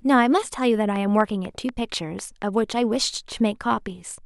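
From 0.96 to 2.43 s a train of clicks ticks through the speech at about 4.1 per second, evenly spaced, around seven sharp pops standing roughly 10 dB above the signal, likely interference or a faulty connection. They appear as thin full-height vertical lines on a spectrogram and narrow spikes on the waveform.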